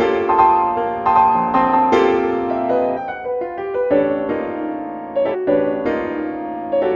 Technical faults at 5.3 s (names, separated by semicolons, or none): compressed frames skipped